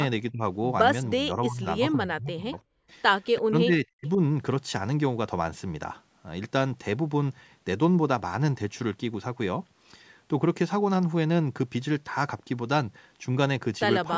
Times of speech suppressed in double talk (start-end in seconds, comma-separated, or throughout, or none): 0.31-0.42, 1.14-2.53, 3.38-4.20